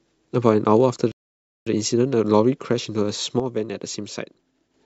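At 1.12 s the speech cuts to silence for 0.55 s, then resumes exactly where it stopped: a rebuffering stall, the player waiting for more downloaded audio. From 3.40 to 4.74 s the level falls abruptly by about 6 dB, likely because one channel drops out, leaving only half the mono sum.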